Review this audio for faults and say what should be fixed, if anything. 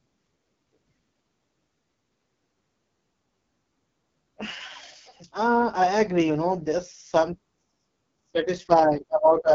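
AMR wideband (HD Voice) codec damage runs throughout the speech. It sounds heavily rough and raspy, pointing to the lowest AMR-WB mode, around 6.6 kbit/s, where the pulse-excited vocal tract model is starved of bits. Nothing remains above 7.5 kHz. To prevent it, carry the call at 12.65 kbit/s or higher, or use a higher-quality codec on that link.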